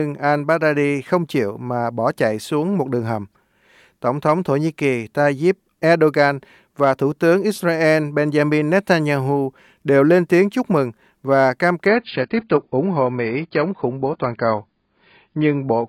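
Adaptive stream at a lower bitrate from 11.87 s to the end of this speech clip, just after "chúc mừng và cam": everything above 5.1 kHz abruptly vanishes without a gap, which fits a switch from about 96 to 16 kbit/s AAC.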